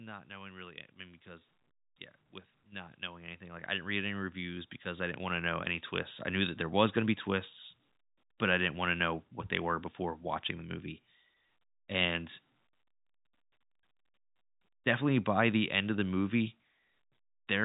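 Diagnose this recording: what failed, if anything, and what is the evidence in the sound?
Automatic gain rising, at the call-processing stage. From 0.25 to 1.55 s the level swells about 5 dB before "yeah with". From 2.66 to 6.62 s it climbs about 15 dB until "was going to be". Voice and background lift together as the AGC ramps up gain on input it judges too quiet.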